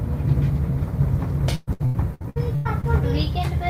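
From 1.55 to 2.85 s, repeated packet loss (robotic sound): eight gaps, each patched by extending the prior sound, up to 116 ms each, covering about 40% of the stretch. Unlike a single dropout, it chops repeatedly.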